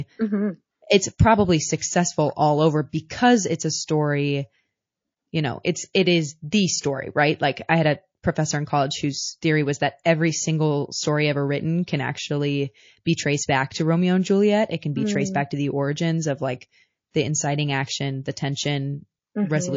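Speech, with plainly audible MP3 compression damage throughout. The top end is dull and cut off, and the remaining band has a watery, swirling texture where weak spectral detail flickers in and out between frames. Sibilants come out chirpy and consonant onsets are smeared. That degree of damage is likely from a low-bitrate MP3 encode, consistent with something around 32 kbps, where the encoder has too few bits to cover the upper frequencies. Two pre-echoes stand out. At 1.79 to 1.82 s, just before "all over", a hiss rises about 12 dB and spreads 29 ms ahead of the attack. At 17.11 to 17.14 s, between "the origins of like" and "the inciting action the", a louder smear of about 17 dB spreads 34 ms before the onset. In both cases, quantisation noise from a long transform block, consistent with roughly 72 ms, is leaking into the quiet moment before a sharp onset. This points to the encoder never switching to short blocks for those attacks.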